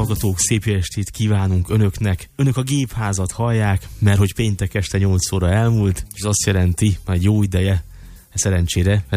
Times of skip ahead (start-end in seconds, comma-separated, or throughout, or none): none